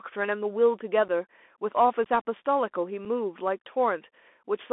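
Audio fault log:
throughout, Bluetooth CVSD headset codec: the speech sits in a narrow band of roughly 250 Hz to 3.5 kHz, so it sounds thin and phone-like, which fits a 64 kbps CVSD link. That codec sends just one up-or-down bit per sample with an adapting step, so fast, loud high sounds outrun it and smear. You can plainly hear that damage as scratchy s sounds and a grainy hiss sitting under the voice.
1.08, 2.04 and 3.05 s, unconcealed Bluetooth headset packet loss: three short, hard-edged dropouts in the speech, 7.5 ms, 15 ms and 7.5 ms long. Their lengths suggest a couple of packets lost at 1.08 and 3.05 s and about four at 2.04 s. Nothing filled the gaps, so each drops out abruptly, and the CVSD decoder has to rebuild its step size, so the speech comes back briefly quieter.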